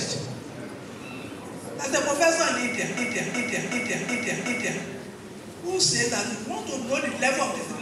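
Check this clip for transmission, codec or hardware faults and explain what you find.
There is one fault, a system hang loop, from 2.97 to 4.83 s. The system froze while the audio hardware kept replaying its ring buffer, so one 0.37 s slice, which fits a 16384-sample buffer, repeats exactly about five times at 2.69 Hz. That sounds like the same short piece looping over and over. Unlike packet-loss concealment, every repeat is identical, with no fading or smoothing.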